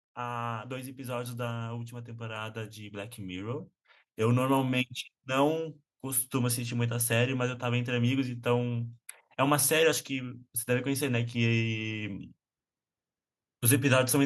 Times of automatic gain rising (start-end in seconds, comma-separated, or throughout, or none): 0.15-6.16